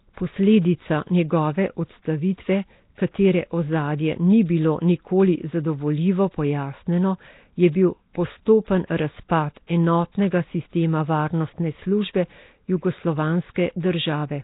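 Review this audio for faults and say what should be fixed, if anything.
Rough, hissy halo and smeared, underwater speech throughout, with nothing above 3.8 kHz, likely heavy Nellymoser compression at a rate fitting 16 kbps. To prevent it, record or export with a higher-quality codec instead of Flash's Nellymoser.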